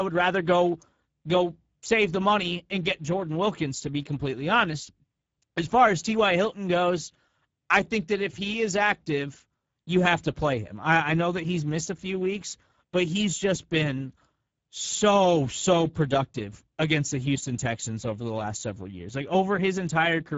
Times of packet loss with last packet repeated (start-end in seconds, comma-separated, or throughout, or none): none